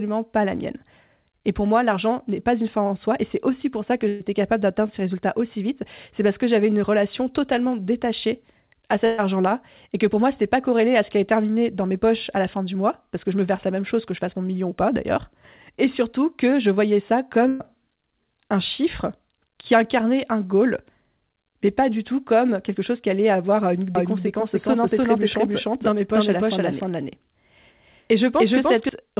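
Speech heard through a call line whose sound stops at 4 kHz, consistent with G.711 mu-law, with two kinds of fault. Three bursts of packet loss fall at 4.08–4.22 s (after "aussi pour ça que", before "capable d'atteindre ces résultats"), 9.06–9.20 s and 17.48–17.62 s (after "que je voyais ça"). Each loses about 120 ms, which is filled with a stretched, fading continuation of the preceding sound rather than silence, and then the speech jumps ahead. A doubled audio track runs from 23.95 to 28.89 s, starting after "chose qui allait avoir". A second full-band copy trails by about 300 ms at roughly the same level, likely from a slower capture path or out-of-step edit. Unlike echo or reverberation, it is one clean repeat with no decay or room colour, and it starts and stops abruptly.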